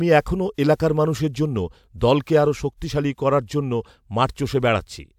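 Nothing goes wrong anywhere in this bit of speech, so there's no technical fault to point to at any moment.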